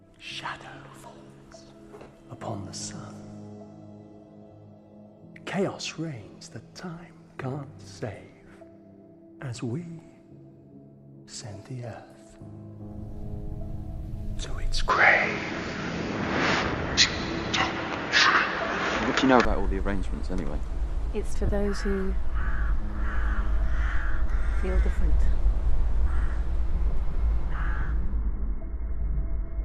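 At 2.03 to 2.06 s, Bluetooth LE Audio frames are lost for 30 ms, and the decoder refills the gap with the previous spectrum under scrambled phase, so the sound briefly blurs into a noisy smear.

From 14.9 to 19.45 s, the input has likely switched to a poorer device. Nothing passes above 7 kHz, so the sound turns dull, and a new background noise sits well below it while the level stays about the same. The change happens with no gap.

Inside that stretch, at 18.71 to 18.73 s, another 20 ms of LE Audio frames drops out and leaves the same smeared patch.

More frames are lost at 21.46 to 21.49 s, for 30 ms, and at 27.81 s, for 10 ms. Each loss replaces a short span with a noisy, repeated-spectrum blur, and the lengths point to 10 ms frames.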